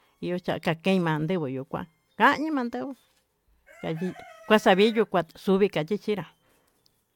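No technical faults are audible.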